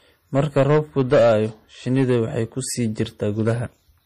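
Right from the start the speech has a watery, swirly quality with nothing above about 15.1 kHz, most likely MP3 compression at a low bitrate somewhere around 40 kbps. The encoder is short of bits, so it cuts the treble and lets weak frequency lines flicker on and off. Hard clipping appears first from 0.36 to 1.37 s, where peaks are pushed about 8 dB past the limit and flattened into harsh fuzz. It returns more lightly from 1.93 to 2.17 s, just before "waxay ku sii", at about 4 dB, and again from 3.41 to 3.52 s, right after "waxay ku sii", at about 3 dB, as crackle on the loudest moments.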